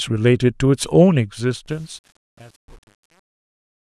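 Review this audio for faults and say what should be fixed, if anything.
Truncation distortion on a fade appears from 1.66 s to 3.99 s, during the fade-out of this speech that begins around 1.7 s in. The fade stage is holding the signal at only 8 bits with no dither, so as the level drops the waveform collapses onto a few coarse steps. From 1.83 s to the end the tail turns gritty instead of trailing off cleanly. To prevent it, apply the fade at full resolution and add dither before any reduction in word length.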